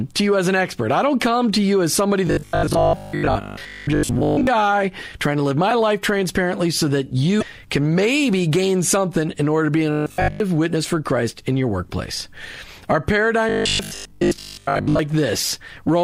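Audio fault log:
2.27–4.47 s, 9.92–10.40 s and 13.49–14.99 s, robotic sound from repeated short buffers: right after "to you as somebody", between "in order to be" and "witness for", and again near the end, the speech turns into a rigid, metallic buzz at 50 Hz that only loosely follows the original. The likely cause is audio arriving too seldom, so the last 20 ms is repeated over and over while most of the real audio in these stretches is skipped.
7.38–7.43 s, damaged data in a compressed stream: between "life transparently so that" and "can maybe gain something", a brief disturbance of about 44 ms breaks the speech. Part of the compressed stream is wrong there. The decoder misreads or rejects those frames, loses sync and must search for the next valid frame header before it can carry on.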